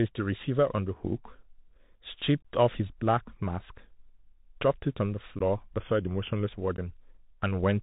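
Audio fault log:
Throughout: Bluetooth CVSD headset codec. The one-bit delta coding, consistent with a 64 kbps narrowband link, leaves nothing above 4 kHz, so the spectrogram stops at a hard ceiling. Its adaptive step lags loud high content, so sibilants turn scratchy over a constant granular hiss floor.
2.42–2.45 s, 5.39–5.41 s, 6.77–6.79 s: unconcealed Bluetooth headset packet loss. A few voice packets vanish each time, about 22.5 ms, 15 ms and 15 ms, replaced by silence or an idle pattern. This shows as waveform gaps with abrupt edges. Level dips briefly after each gap.
5.80–6.46 s: drift correction step. Speed drops about 6.3% and pitch about 113 cents, roughly a semitone. The spectrogram's harmonics slide downward together and the waveform stretches for that stretch. This is likely a clock-matching resampler changing rate abruptly to rebalance its buffer.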